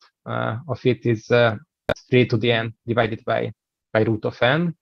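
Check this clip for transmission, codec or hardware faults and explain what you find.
One fault is audible: a call bitrate drop starting at 3.03 s and lasting until the audio ends at 4.81 s. The bandwidth estimate collapses, so the encoder goes from about 96 kbps down to about 21 kbps and stays at that lowest rate for roughly 1.07 s. With so few bits the sound is coded coarsely and loses its top end, turning rough, watery or muffled. Packet loss would leave gaps or stutters. This stays continuous while the quality degrades.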